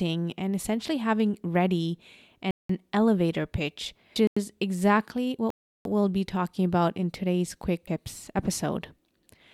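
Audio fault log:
2.51 to 2.69 s, block of digital silence: right after "and essentially having ready", the sound drops to silence for about 186 ms, then resumes on "elevator pitch". The length fits an 8192-sample block the output buffer never received in time. The abrupt cut in and out leaves a clear hole.
4.16 s, damaged data in a compressed stream: just after "elevator pitch", corrupted bytes make the decoder misread a frame and lose sync.
4.27 to 4.37 s, block of digital silence: a shorter dropout of about 93 ms, consistent with a 4096-sample buffer left unfilled, heard as a gap.
5.50 to 5.85 s, block of digital silence: the longest hole, about 348 ms of silence with hard edges.
7.87 s, damaged data in a compressed stream: after "about in today's quick", another bad frame throws the decoder off while it hunts for the next header.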